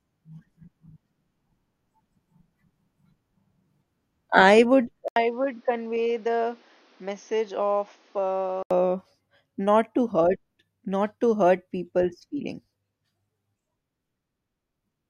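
An 80 ms gap at 5.08 s, then dull, quieter speech until 8.71 s: spectrogram empty above 6.6 kHz, waveform smaller. Likely an input switched to a poorer device.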